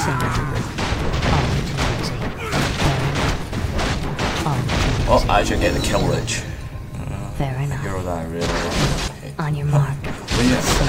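No technical fault can be heard anywhere in this audio. There is nothing in it that calls for a time or a description of damage.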